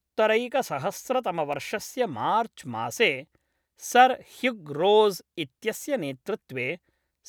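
A nearby switch, motor or static discharge likely arced and the audio line picked up the burst, producing an electrical switching spike in this speech recording. At 1.53 s it appears as a sharp snap or tight cluster of clicks, a brief impulse of well under 20 ms, laid over the speech rather than replacing it. It peaks at about -30 dBFS.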